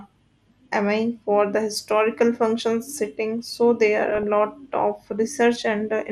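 Throughout the speech the sound is dull and muffled, with a gurgling, grainy texture, and the upper frequencies seem to come and go. This is MP2 compression damage, plainly audible here. The likely cause is MPEG Layer II coding at a low rate, around 80 kbps. The coder splits the audio into sub-bands and, short of bits, drops the highest ones and quantises the rest coarsely, so the treble flickers and the remainder sounds gritty.

From 4.10 to 4.23 s, right after "functions sitting so there" and before "lot of", a short burst of burbling breaks over the speech, with short blips of noise in individual frequency bands. This is DAB burbling. Bit errors in the received stream, at a rate of a fraction of a percent, slipped past error correction and corrupted sample values. The burst lasts long enough to fit roughly six damaged frames, each putting short blips of noise into single sub-bands.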